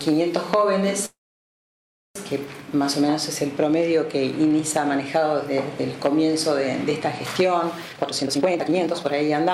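At 1.05 s the audio stops moving forward: the last sound is briefly carried on as a fading hiss-like tail and then falls to near silence for about a second before playback resumes at 2.17 s, picking up exactly where it left off with nothing skipped. This is a call audio freeze, most likely from packets stalling in transit so the jitter buffer drained. The receiver could only stretch out the last fragment and wait, inserting roughly 1.1 s of filler and pushing everything after it later by the same amount. From 7.89 s to 9.51 s the audio rushes, running at about 160% of normal speed while its pitch stays unchanged, which gives it a hurried, compressed feel. This is a jitter buffer speed-up. With more audio queued than its target, the receiver repeatedly cut out short pitch-period-sized slices to shrink the backlog, discarding around a second of material to catch up.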